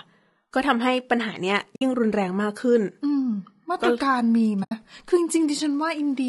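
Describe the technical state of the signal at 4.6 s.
At 4.6 s the speech drops into a soft-edged gap running from about 4.63 to 4.72 s. The sound fades out and back in, leaving roughly 80 ms of near-silence. This is AAC frame loss with muting: the decoder received nothing for that stretch and zeroed the spectrum. Its overlapping windows turned the hard loss into short fades, and the gap's length fits about four 20 ms frames.

Around the gap, the speech carries plainly audible low-delay AAC compression. Voiced sounds come out rough and grainy, with noise filling the spaces between harmonics and a thin, somewhat synthetic upper band. The likely cause is AAC-ELD, the low-delay codec of video calls. Its short frames resolve pitch harmonics poorly and spend bits quickly, and the level of damage heard here points to a bitrate around 32 kbps.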